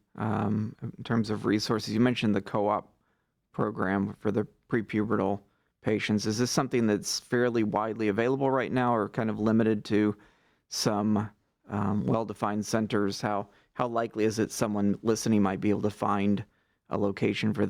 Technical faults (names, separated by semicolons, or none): none